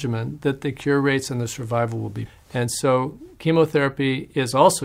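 At 2.25 s the audio lurches forward with no gap. This is a skip ahead: about a second of sound was dropped and the two sides were joined directly. From 2.35 to 4.83 s the sound runs hurried at unchanged pitch, about 8% fast. This is a jitter buffer speed-up, in which the receiver trimmed pitch-period slices to shed roughly a fifth of a second of excess delay.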